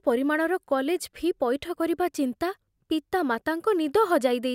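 A short speech recording with no audible technical faults. Nothing in it points to a problem with how it was captured or carried.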